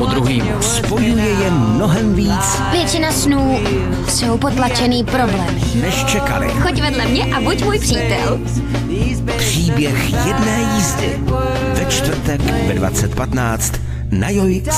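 A steady 60 Hz mains hum runs the entire length, leaking in from the power line and sitting around 10 dB below the main signal.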